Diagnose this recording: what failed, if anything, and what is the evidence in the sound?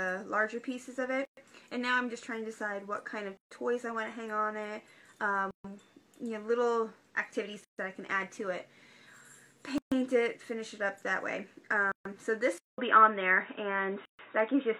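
Codec stage: a gap at a join of encoded pieces. Silences open at 1.25, 3.37, 5.51, 7.64, 9.78, 11.92 and 14.05 s. The first lasts 120 ms, the rest about 136 ms. They recur roughly every 2 s. Each piece was encoded separately. Its start-up delay and padded last frame stayed in at the joins.

Input stage: the sound turns dull from 12.58 s to the end. A 200 ms silence marks the change. Nothing is left above 3.8 kHz, the level shifts by about 5 dB, and new noise appears roughly 35 dB below the signal. The likely cause is the input switching mid-recording to a poorer, narrower-band device.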